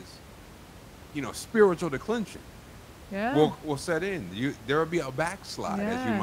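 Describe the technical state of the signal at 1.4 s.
At 1.4 s the signal is intact, with only the room's own background noise sitting about 20 dB below the speech.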